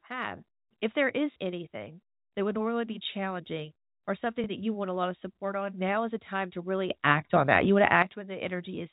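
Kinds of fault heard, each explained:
Packet loss with last packet repeated: at 1.32 s and 4.44 s, lost packets were filled by replaying the previous one, causing a 40 ms stutter and a 20 ms blip.
Sudden gain jump: right after "a time to really", the level leaps about 12 dB from 6.90 to 8.02 s, likely an unramped digital gain change.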